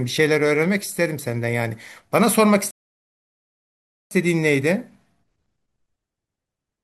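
At 2.71 s the speech drops to silence and holds until 4.11 s, a rebuffering stall: the player exhausted its downloaded audio and waited for more data. Playback then resumes exactly where it halted, so nothing is skipped, but about 1.4 s of dead air is inserted.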